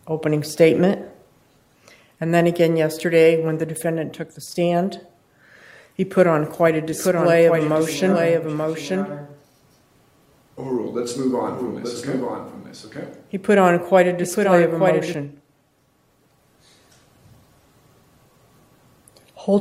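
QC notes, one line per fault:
6.92–15.14 s, doubled audio track: a full-band copy trails the original by about a second, roughly 5 dB quieter, dry and without decay, appearing and vanishing abruptly; likely a second capture path or misaligned edit. The spectrogram shows every event repeated one second later, fainter.
15.27–19.60 s, adaptive stream at a lower bitrate: quality drops suddenly with no gap, treble thinning and swirly, watery codec artefacts rising, consistent with MP3 falling from 128 to 48 kbit/s. The spectrogram's upper band cuts off lower from that point, with smeared high-frequency texture.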